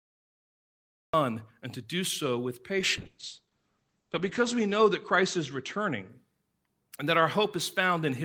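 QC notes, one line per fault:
0.00–1.14 s, cut-off start: The recording or stream began late, so the clip opens on digital silence and the first sound arrives abruptly at 1.14 s, already in progress, just before "and to do so". Because capture began partway through the utterance, there is no natural onset or rising attack. The opening syllable is clipped off at its front edge rather than building up from quiet.
2.80–6.15 s, call bitrate drop: Starting just after "to do so with", the call's bandwidth estimate fell and the encoder was pushed to a much lower rate. The sound fits a drop from about 32 kbps to about 9 kbps, holding at the bottom for roughly 1.6 s. Audio bandwidth narrows from 20 kHz to 8 kHz, so detail above 8 kHz vanishes and sibilants lose their top. The coarser coding leaves the speech muffled and rough until the rate recovers.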